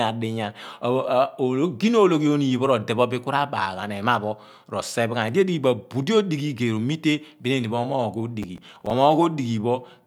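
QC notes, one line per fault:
8.43–8.91 s, processor overload crackle: a burst of gritty crackle rides on the speech for about half a second, then stops. The processor is failing to fill its small audio buffers in time, and each missed deadline replays a scrap of old audio with hard edges instead of fresh sound. The tearing texture fits buffers of around 5 ms, with roughly ten misses scattered through the burst.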